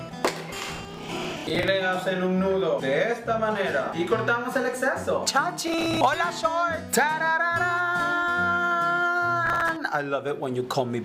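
A gritty, tearing crackle rides on the sound from 0.59 to 1.68 s, again from 5.68 to 5.97 s and from 9.46 to 9.69 s. This is processor overload crackle: many short buffers, around 10 ms each, miss their deadlines in a row, and each miss replays stale audio with hard edges.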